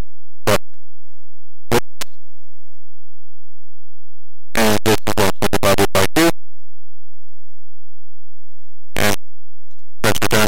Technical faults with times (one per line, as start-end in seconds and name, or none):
0.00-10.47 float read as integer